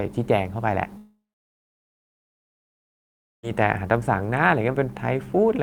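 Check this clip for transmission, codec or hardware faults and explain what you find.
One fault stands out in this speech. Long network dropout, 0.97 to 3.45 s: likely lost packets. The last sound fades out as a brief buzz, followed by 2.24 s of silence, and speech returns with the middle missing.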